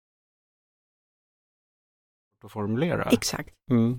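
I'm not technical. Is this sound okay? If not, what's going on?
Yes, this speech sounds fine, and the only thing you might notice is the level gently rising from about two and a half seconds until 3.0 s, which is a deliberate smooth fade in, just as an editor would add.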